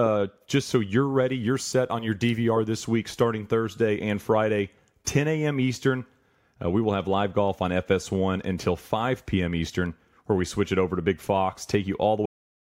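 At 12.26 s the speech ends with a cut-off end: the recording stops partway through a sound rather than letting it finish, because the final stretch of audio, about half a second, was never written out. What you hear is an abrupt drop straight into digital silence with no natural decay. On a waveform the signal ends at a sharp vertical edge followed by a flat line. A spectrogram shows energy across the band stopping dead, with no fading tail.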